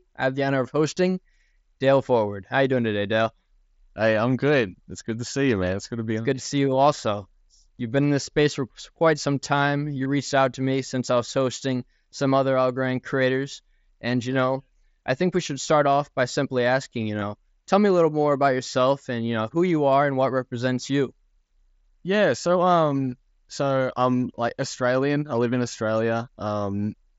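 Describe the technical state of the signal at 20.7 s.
At 20.7 s the speech is intact, with no fault; it comes through the Bluetooth mSBC headset path, band-limited to about 8 kHz with that codec's light graininess.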